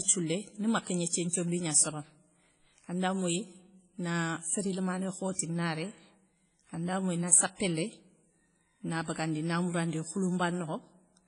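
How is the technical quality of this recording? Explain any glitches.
Technical quality is fairly rough. There's heavy codec damage across the whole recording and one pre-echo near the start.

The WMA compression runs the full length of the speech. The sound is ringing and washy, with a hiss that swells and fades with the speech, and nothing comes through above about 10.1 kHz. The likely cause is a transform codec at a low bitrate, roughly what you'd expect around 24 kbps. The encoder zeroes weaker spectral detail and smears its quantisation noise over long blocks, so everything sounds dull and watery.

The pre-echo sits at 1.08 to 1.13 s. A sharp onset lands late in a coding block, and the noise sized for that loud attack spreads back into the quiet moment before it, about 48 ms of it. You hear a short burst of hiss just ahead of the attack, and the attack itself comes across softened and smeared rather than crisp.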